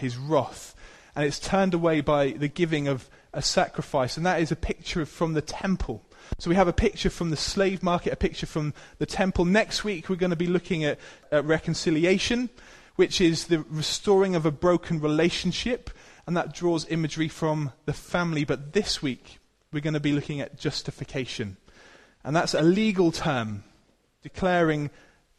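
At 1.41 to 1.50 s there's a corrupt frame decoded: damaged bits got played anyway, throwing energy to the wrong frequencies in a noisy squeak peaking about -20 dBFS, which sounds like several frames' worth. Shorter, quieter blips follow at 18.39 s and 22.58 s.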